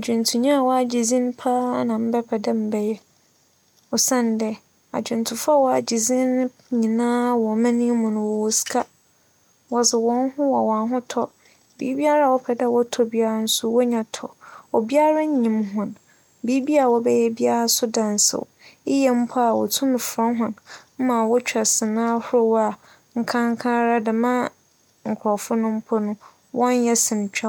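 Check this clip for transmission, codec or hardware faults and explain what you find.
Listening closely turns up no faults anywhere in this speech recording. There is nothing to report or explain.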